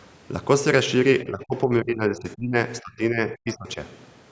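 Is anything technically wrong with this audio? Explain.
Yes. Between 1.24 and 2.55 s, and again between 2.81 and 3.78 s, the speech is suppressed in double talk. With both ends of the call likely talking at once, the echo canceller can't separate the near talker from the loudspeaker echo, so it turns both down. The speech dips, thins and breaks into pieces, for roughly a second in the first stretch with drops of about 20 dB, and about 0.7 s in the second, reaching about 25 dB.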